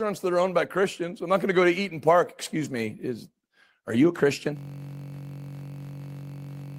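System hang loop from 4.57 s to the end, after "is are you a": the frozen system keeps replaying one 21.33 ms chunk, producing a steady 46.9 Hz buzz.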